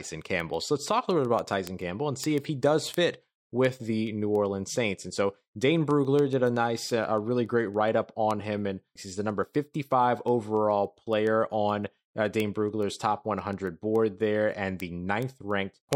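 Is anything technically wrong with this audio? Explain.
Yes. The audio suffers from word clock ticks running from 0.12 s to 15.93 s. A digital link is being read by a receiver on its own clock rather than locked to the sender's, with the two rates differing by something like 150 ppm. Each time the clocks slip past one another, a single sample is dropped or repeated. In the speech this comes through as sharp ticks of uneven strength, recurring steadily roughly every 0.15 s, around a hundred across the clip.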